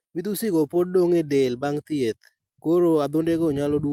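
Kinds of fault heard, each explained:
Clock drift between sender and receiver: The speech drags slightly and its pacing feels a little unsteady from start to finish, with small hiccups at uneven intervals rather than any single obvious break. The sending side's audio clock runs about 4 percent slower than the receiving side's, so audio arrives a little too slowly and the jitter buffer keeps drifting toward empty. The receiver has to keep patching the shortfall throughout the clip.
Repeated timing corrections: From about 0.06 s to 3.91 s, tiny stutters and a slightly stretched, uneven tempo come from the receiver repeatedly inserting short repeated slivers of audio to keep pace with the slower sender. All the edits go the same way, lengthening rather than cutting, and together they add roughly 150 ms. That leaves the speech running at about 96 percent of its natural speed, with the hitches spaced irregularly.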